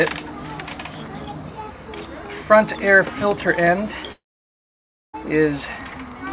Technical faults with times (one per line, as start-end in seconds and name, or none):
4.12-5.15 long network dropout